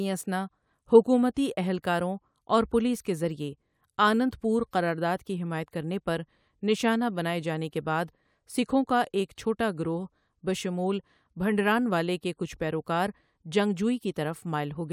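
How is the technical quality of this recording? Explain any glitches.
Nothing goes wrong technically anywhere in this recording.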